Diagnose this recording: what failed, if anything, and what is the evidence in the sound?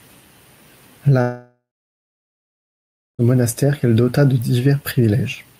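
The speech breaks off from 1.21 to 3.22 s, likely a long network dropout. The last sound smears into a fading buzz, then about 1.5 s of near-silence before "monastère qu'elle dota de". On a spectrogram, a blurred tail gives way to a blank band.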